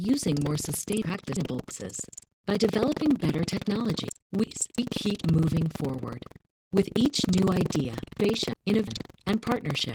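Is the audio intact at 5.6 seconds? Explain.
No. At 5.6 seconds the sound is damaged by two faults that run through the whole clip.

Buffer tearing is heard as a steady robotic rattle at about 21.5 Hz, present wherever there is speech. The writer and reader of the playback ring buffer have drifted so that they cross inside each period. Roughly a sixth of every buffer replays audio from about a fifth of a second earlier, with hard joins on both sides. A 21.5 Hz repeat fits a 2048-sample buffer. On a waveform this shows as abrupt discontinuities every 46 ms or so. A spectrogram shows thin vertical lines at that spacing, cutting through the harmonics.

Opus voice compression gives the speech a slightly hoarse, smeared, robotic texture with plainly audible coding damage. The codec is running in hybrid mode: the linear-prediction layer codes the band below 8 kHz with coarse excitation, and a transform layer covers the upper band. 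The sound is consistent with a bitrate around 16 kbps in 20 ms frames. On a spectrogram the energy stops near 20.2 kHz, the harmonics look blurred and unsteady, and the band above 8 kHz is patchy, with blocky texture that changes frame by frame.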